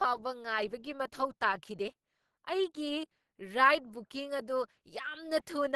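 Speech that sounds muffled, hoarse and somewhat grainy throughout, with nothing above about 12.2 kHz. The likely cause is Opus compression running in its hybrid speech mode at a low rate, fitting roughly 16 kbps, which narrows the bandwidth and roughens the voice.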